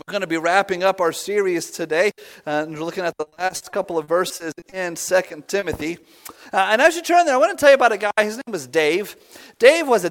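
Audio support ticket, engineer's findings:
Choppy, robotic stretch, 3.21–4.74 s. Repeated packet loss (robotic sound): 13 gaps, longest 40 ms, about 20% of the span patched by the receiver extending the previous sound, so pieces of audio drop out.

Brief smears or wobbles at 5.28–5.32 s, 5.44–5.48 s and 5.60–5.64 s, roughly 160 ms apart. Short concealed packet loss: about 20 ms missing each time, bridged by continuing the prior sound, then crossfaded back into the received signal.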